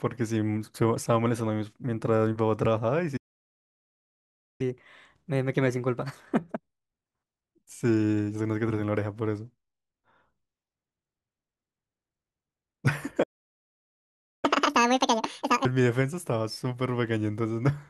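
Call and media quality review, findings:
Playback stall, 3.17 to 4.61 s: speech halts mid-flow, silent about 1.4 s, then resumes. Likely player buffer underrun or blocked audio thread. Unlike a packet-loss dropout, the halt is one long clean silence, not chopped fragments.

Playback stall, 13.23 to 14.45 s: same symptom, silence about 1.2 s mid-flow. Likely underrun or thread blocking again. Unlike a mute or gain dip, there is plain silence with an abrupt stop and restart.

Catch-up at higher speed, 4.61 to 7.61 s: speech at 1.15x speed, pitch raised about 2 semitones, then back to normal. Jitter buffer or player draining backlog by plain resampling. Unlike time-stretching, pitch rises with tempo.

Catch-up at higher speed, 14.45 to 15.65 s: 2x speed, pitch up roughly 10 semitones. Aggressive resampling drain after the second stall. Pitch tracks speed, which rules out pitch-preserving stretch, and the direct link to the stall rules out source-side varispeed.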